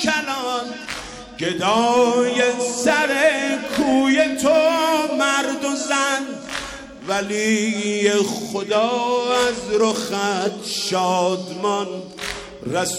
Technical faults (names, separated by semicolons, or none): none